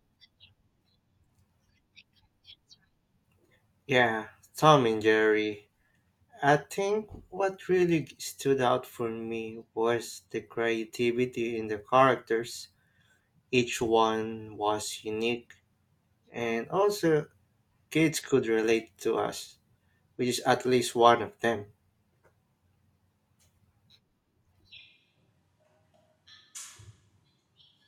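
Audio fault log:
24.81 s to end, switch to a distant microphone: At 24.81 s the speech turns roomy and hollow all at once. The bass thins out. The level stays about the same. More background noise comes in, roughly 30 dB below the speech. The change is abrupt and lasts to the end of the clip. The likely cause is that the close microphone dropped out and a microphone farther away took over, picking up more of the room's reflections and noise.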